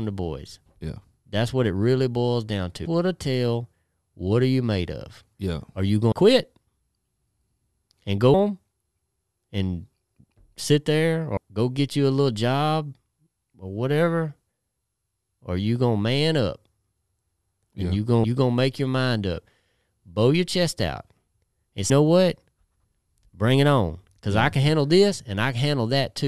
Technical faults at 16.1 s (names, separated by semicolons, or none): none